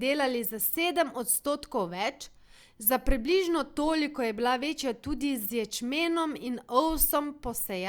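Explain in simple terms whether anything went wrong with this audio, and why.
Nothing went wrong with this audio, because there is no fault to hear anywhere in the speech.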